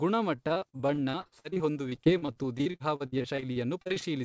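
From 0.36 to 4.03 s, choppy, robotic speech: repeated packet loss, with dozens of gaps up to 60 ms, each patched by prolonging the preceding sound.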